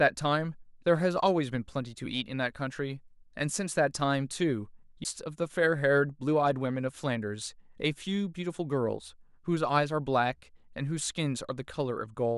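At 5.04 s a tick and a brief dropout of a few milliseconds break the speech, which resumes from elsewhere: a CD skip, the laser jumping tracks.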